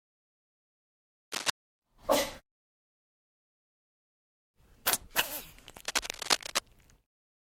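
From 1.32 to 1.50 s, and again from 5.85 to 6.59 s, a harsh scratching rustle sits a little above the sound itself: cable scratch noise, likely from a worn cable or connector being moved so its contact resistance jumped erratically.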